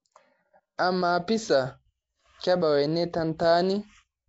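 Throughout, the speech has a rough, hissy halo and a smeared, underwater blur. This is plainly audible Nellymoser compression, likely from the Asao codec at a rate fitting 32 kbps. Weak bands are replaced with noise, and a spectrogram shows that grainy fill under a hard ceiling at 7.7 kHz.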